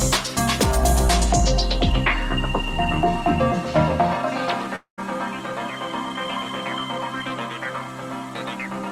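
A long network dropout at 4.76 to 5.00 s smears the sound into a fading buzz, then silence; 220 ms goes missing, likely from dropped packets.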